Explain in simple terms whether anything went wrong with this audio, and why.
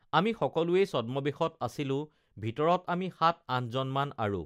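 Nothing went wrong here.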